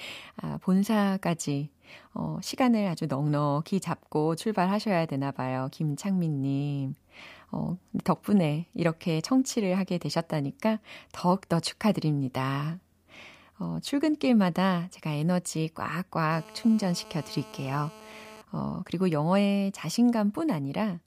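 From 16.32 to 18.42 s, GSM phone buzz sits about 21 dB below the speech. A nearby 2G handset on a call pulses at 217 Hz, and the audio circuit rectifies those bursts. The result is a steady, raspy buzz, harsher than mains hum and not at 50 or 60 Hz.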